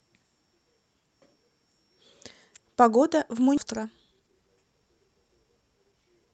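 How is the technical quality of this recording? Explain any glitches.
The speech has two timing glitches in its second half, heard through call-codec coding with audio cut off above 8 kHz.

At 3.57–3.59 s a skip ahead drops about a second of audio and joins both sides directly. Unlike a dropout, there is no silent gap.

From 3.64 s to 6.33 s, jitter buffer speed-up trims pitch-period slices to shed about half a second of delay. Speech runs at 119% but, unlike a resampling error, keeps its pitch.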